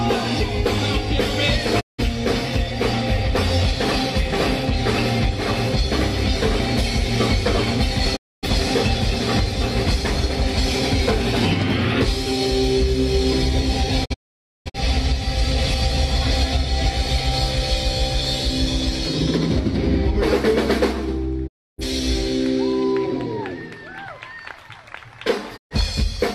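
Right from the start there's hard clipping running through the whole thing: the level was pushed roughly 5 dB past what the chain could pass, so the loudest peaks get sliced flat. Only a small slice of the audio, well under one percent, actually hits the ceiling, so it's not a constant fuzz. You hear it as a gritty crackle riding the loud moments, from those squared-off tops spraying harmonics high up.

Then there's digital broadcast dropout, five times. The receiver lost good frames and muted until clean data came back, each hole easing in and out over about 20 ms. At 1.79 to 2.02 s about 0.17 s goes missing, and at 8.15 to 8.48 s about 0.26 s. The worst is 14.04 to 14.78 s, where several gaps scatter over about 0.68 s, the longest lasting about 0.51 s. At 21.46 to 21.83 s about 0.30 s drops, and at 25.56 to 25.75 s about 0.13 s. Whatever was sent during those gaps is simply gone.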